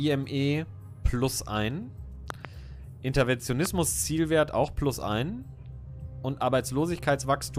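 Loud pops at 2.30 to 2.47 s, a quick double, and a single one at 3.66 to 3.68 s. Each jumps roughly 15 dB above the sound, which carries on underneath. Likely a voltage spike from a plug, a switch, or static.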